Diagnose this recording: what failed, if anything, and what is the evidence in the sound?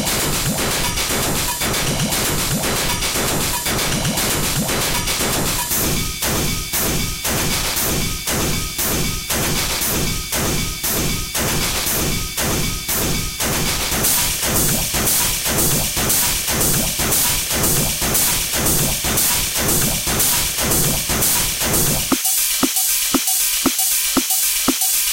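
A feedback whistle sits at 3.6 kHz from 17.54 to 20.40 s, a thin steady tone some 25 dB below the audio, swelling and fading slowly in level. The likely cause is a loudspeaker-to-microphone loop held just at the point of feedback, sustaining without running away.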